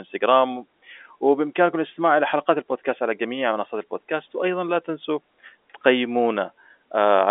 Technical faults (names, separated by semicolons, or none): none